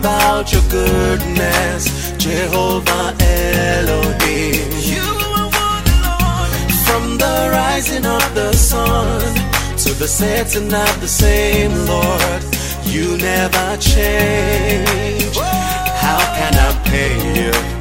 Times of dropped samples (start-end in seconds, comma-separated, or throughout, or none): 16.29